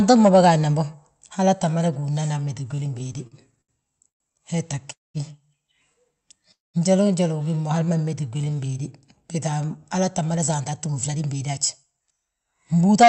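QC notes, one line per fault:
2.71–3.71 s, repeated stalls (stutter): the speech catches and restarts twelve times in about a second, each hitch a brief smear of held sound, the longest about 72 ms. Packets kept arriving late, so the jitter buffer emptied repeatedly and the receiver stretched the last sound to bridge each wait; nothing is lost, but roughly a fifth of that second is filler.
4.08 s, 4.92 s and 6.52 s, call audio freeze: three sudden halts, about 117 ms, 222 ms and 221 ms long, each a short buzzy carry-over of the last sound that fades into silence before the speech resumes where it stopped. Delayed packets likely drained the jitter buffer, inserting these gaps.
7.79–8.82 s, jitter buffer slow-down: this second drags, running at about 86 % speed with unchanged pitch and drawn-out sounds, around 149 ms of extra length in all. The receiver was refilling a low jitter buffer by repeating single pitch periods over and over.
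10.34–13.03 s, jitter buffer speed-up: the closing stretch sounds a little hurried, about 108 % speed at the same pitch, with around 0.2 s trimmed out overall. Audio had piled up in the jitter buffer, so the receiver kept cutting tiny pitch-period slices to bring the delay back down.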